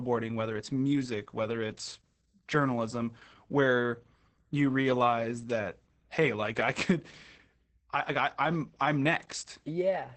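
Speech runs throughout with heavy Opus voice compression: muffled, hoarse and slightly robotic, consistent with SILK coding at roughly 10 kbps. A spectrogram would show a hard ceiling at 8 kHz, smeared harmonics, and coarse texture fitting 20 ms frames.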